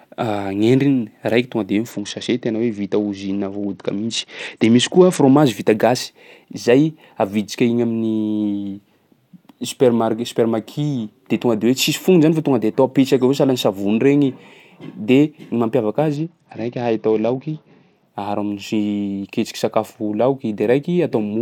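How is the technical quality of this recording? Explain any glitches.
The speech is marred twice by a Bluetooth SBC bit pool drop, from 1.91 to 5.37 s and again from 16.17 to 18.08 s. A congested link starves the encoder of bits, so the highest sub-bands go empty and the rest are coarsely quantised. The treble dulls and a gritty roughness rises, which fits a fall from a bit pool of 28 to 9, around 78 kbps. Unlike packet loss, the sound never drops out; it simply degrades, then recovers.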